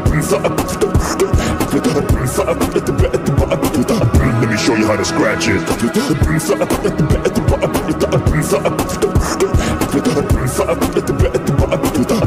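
No technical faults can be heard anywhere in the recording; the signal holds steady throughout.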